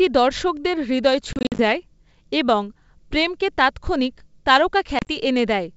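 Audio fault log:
1.33–1.61 s and 4.99–5.09 s: packet loss on an ADPCM call. The first stretch loses 150 ms of sound, scattered over 260 ms, with gaps up to 50 ms long. The second loses 50 ms over 80 ms, with the longest gap 30 ms. The gaps fit packets of about 10 ms. Each hole is filled with hard-edged silence. The decoder's predictor and step size then drift from the sender's, so sound resumes with brief, slight distortion.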